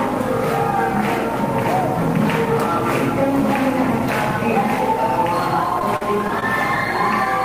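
A steady buzz with a layer of hash above it runs through the whole recording, sitting only around 15 dB below the wanted sound. It is video or display buzz: a screen or video cable leaking its 60 Hz field rate into the audio path.

From 5.79 to 6.43 s the sound turns choppy, breaking into a stutter with small pieces missing. This is repeated packet loss: several holes in quick succession, the longest about 42 ms, each patched by stretching the preceding sound, concealing roughly 14% of that stretch.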